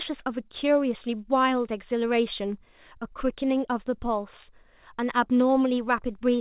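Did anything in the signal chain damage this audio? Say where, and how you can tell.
No, nothing in the chain damaged this speech; the band stopping at 4 kHz is simply what a G.711 mu-law call path at 64 kbps passes, not a fault.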